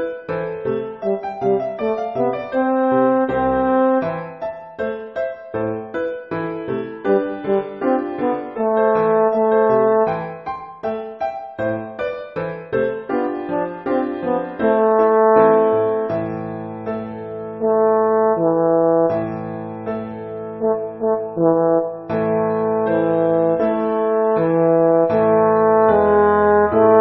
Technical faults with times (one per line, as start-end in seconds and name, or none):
none